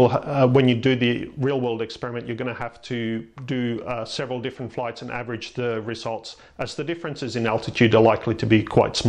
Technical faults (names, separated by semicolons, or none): zipper noise